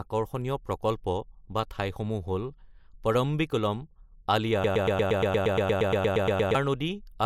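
The clip is speech. From 4.64 s to 6.55 s it falls into a broken-record loop. A fragment about 117 ms long plays back to back, 16 times, with each repeat identical. The speech that belonged in those two seconds never arrives and is lost. The likely cause is a stall in the player, encoder or stream, which kept sending the last piece of audio it held.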